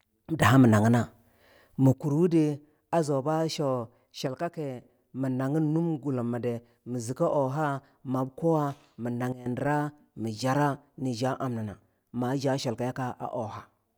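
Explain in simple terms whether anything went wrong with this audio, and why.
Sudden gain jumps at 0.42 to 1.94 s (louder, ending just before "urwudi a zu ba"), 4.27 to 4.82 s (quieter, ending before "mii naginnum gullumi di"), and 9.32 to 9.46 s (much quieter). The speech and background noise jump in level together, likely because a volume setting was applied abruptly without a smooth fade.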